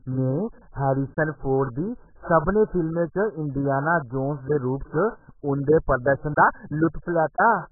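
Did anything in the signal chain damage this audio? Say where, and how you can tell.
Yes. The damage sits at the codec stage and runs through the whole speech clip. Nothing is present above 1.8 kHz, so sibilants lose their edge and the sound is dull, with a watery, warbling smear on sustained sounds. On a spectrogram that shows as a flat ceiling at 1.8 kHz with patchy, holed bands below it. The likely cause is heavy AAC compression, AAC-LC starved to a very low rate (around 8 kbps), lowering its cut-off and dropping spectral detail.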